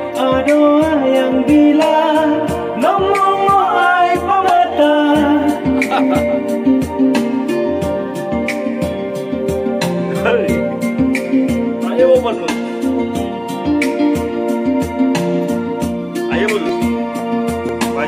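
Near the end, from 16.69 to 17.69 s, there's a short run of periodic USB or driver dropouts: roughly three tiny ticks spaced 0.5 s apart. Each one is about a millisecond of sound simply skipped, as if something stalled the bus or driver on a fixed schedule.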